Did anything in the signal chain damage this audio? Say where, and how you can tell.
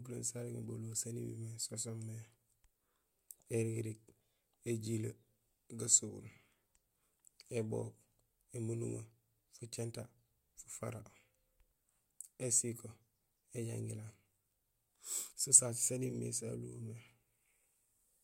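No damage from the chain.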